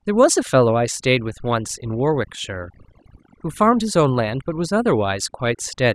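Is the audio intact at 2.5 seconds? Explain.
No. At 2.5 seconds the speech is affected by overdone noise removal, which runs through the whole clip. A noise reducer set too aggressively pulls down individual frequency bands near its noise estimate, taking quiet speech detail with them, so the background drops and breaks up into twinkling specks.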